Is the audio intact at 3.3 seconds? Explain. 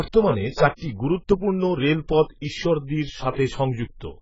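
No. At 3.3 seconds the speech sits inside damage that runs through the whole clip: nothing is left above about 7.6 kHz, the sound is dull and smeared, and sibilants carry a warbling, fizzy texture. This is likely AAC compression, at a rate that points to about 12 kbps, coding too few bits per frame and leaving holes in the spectrum. A simple low-pass filter would cut the top cleanly, without the swirling, unstable texture.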